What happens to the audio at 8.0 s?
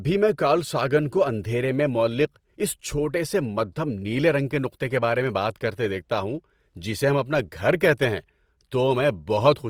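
At 8.0 s the speech carries the same Opus compression damage heard across the whole clip, with nothing new starting or ending there. The artefact is plainly audible. Tones take on a rough, grainy, noisy texture rather than MP3-style swirl, while the full bandwidth is retained. That points to Opus music (CELT) mode at a low rate near 24 kbps, likely the cause. Short of bits, the encoder preserves each band's energy but fills detail by folding lower bands or injecting noise.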